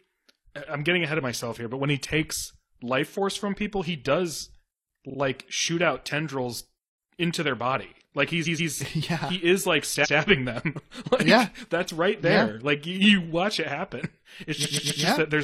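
A speech clip with repeated frames stuttering in four spots: a 43 ms slice plays twice extra at 5.06 s, after "from people he does"; 128 ms blocks repeat twice at 8.43 s, once at 10.01 s after "yeah he is like", and three times at 14.61 s. Each repeat lengthens the audio, which fits compressed frames being resent.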